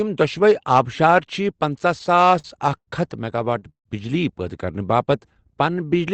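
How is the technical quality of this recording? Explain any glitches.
The speech stutters twice from repeated stalls, between 1.99 and 2.89 s and again between 3.37 and 3.87 s. Packets arrived late, so the jitter buffer repeatedly emptied and the receiver stretched and faded the last sound until data resumed. The first stretch has nine short holds up to 95 ms. The second has five holds up to 160 ms, and concealment covers roughly 41% of that span. Nothing is lost, but delivery drags and judders. The call-codec path tops out around 8 kHz.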